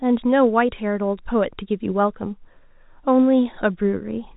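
Nothing stood out on listening to this speech, which comes through G.711 telephone coding with nothing above about 3.8 kHz, as that format normally carries it.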